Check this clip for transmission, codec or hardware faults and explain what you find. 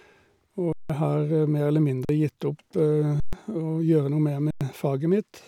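The speech has four dropouts, all of one kind: an underrun with held sample, at 0.73 to 0.90 s, 2.05 to 2.09 s, 3.20 to 3.33 s, and 4.51 to 4.61 s. Each time, the output buffer ran dry and the converter held its last value, so the waveform flattens at a non-zero level and the sound stops abruptly with hardly a click. The gaps last 171, 43, 128 and 101 ms. Live audio of about the same span is lost in each, so the speech jumps ahead when it resumes.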